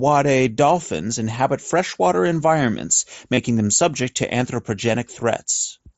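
At 3.34 to 3.37 s the speech shows concealed Bluetooth headset packet loss: roughly 30 ms of audio never arrived from the headset, which fits a short run of about four lost packets. The receiver bridged the gap by repeating the closest-matching slice of the preceding waveform, so the moment sounds like a brief buzzy, held tone at steady level, followed by a slight warble as the real signal resumes through the wideband mSBC link.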